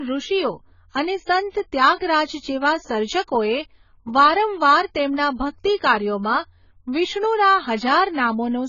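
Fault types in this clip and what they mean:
AAC compression: The speech sounds heavily dulled and smeared from start to finish. Nothing is heard above 7 kHz, so the top of the spectrum is simply gone. Sibilants and held sounds take on a watery, warbling texture. The likely cause is AAC-LC coding at a very low rate. The codec quantises each frame's frequency lines coarsely, cuts the high band, and lets detail collapse. The depth of damage fits a bitrate around 16 kbps.
pre-echo: A short burst of hiss appears just before a sharp onset, from 1.95 to 2.01 s. It leads the attack by about 52 ms. A transform codec spreads its quantisation noise across a whole block. Here the attack falls late in its block, so noise sized for the loud part spills into the quiet gap before it. The onset itself sounds softened and blurred rather than crisp.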